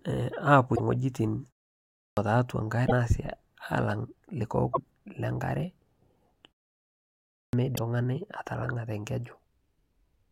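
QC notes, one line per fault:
0.72–0.80 s, 2.84–2.92 s, 4.69–4.77 s and 7.72–7.79 s: damaged data in a compressed stream. Each is a brief glitch lasting about 70 to 80 ms. Corrupt bytes broke those frames. The decoder lost sync and recovered at the next valid frame header.
1.93–2.17 s and 7.29–7.53 s: clipped start after a pause. Speech returns abruptly after pauses of 0.49 s and 0.84 s, missing its first 240 ms each time. The output device slept during the silence and was still waking when sound resumed.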